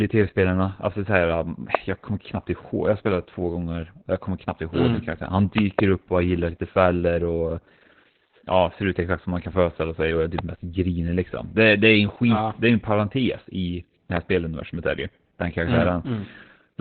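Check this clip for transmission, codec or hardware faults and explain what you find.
One codec fault runs through the whole clip. The speech sounds muffled, hoarse and faintly robotic, with nothing above about 4.4 kHz. This is heavy Opus voice compression in its narrowband SILK mode, which models the voice coarsely and discards the upper band, consistent with a bitrate near 8 kbps.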